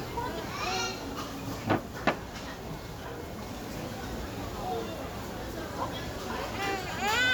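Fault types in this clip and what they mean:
No faults detected.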